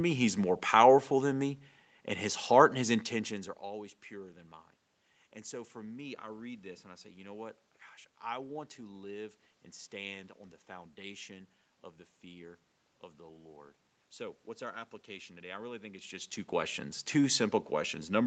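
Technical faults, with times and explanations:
No technical faults detected.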